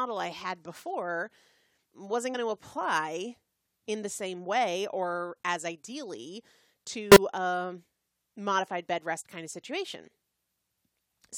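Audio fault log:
2.33 s, compressed frames skipped: around 70 ms of audio just drops out right before "to apply in the", so the speech lurches forward a little.
7.12–7.17 s, corrupt frame decoded: one damaged frame got played anyway, and its garbled data put energy at the wrong frequencies. You hear a short glitch lasting about one frame, peaking at about −10 dBFS.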